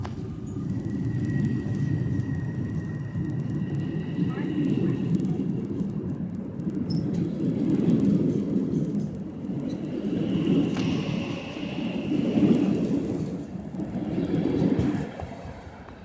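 A steady tick runs under the whole clip at 20 Hz, one every 50 ms, and it only shows up while there's signal. That's the signature of a resampler restarted on every block. Each 50 ms chunk got converted on its own, so the filter saw silence or wrapped-around samples at the edges, leaving a small error at every block boundary. The band-limited sound fits a conversion from 44.1 kHz down to 16 kHz.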